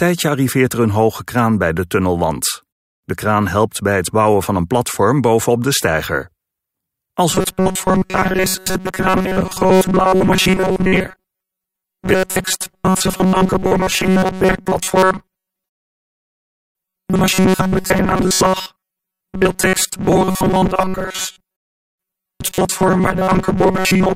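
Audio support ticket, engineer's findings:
Robotic sound from repeated short buffers, 7.31 s to end of clip. Rigid metallic buzz near 188 Hz. Likely cause: audio input starving, playback looping a roughly 5.3 ms buffer, with most of the signal replaced by repeats.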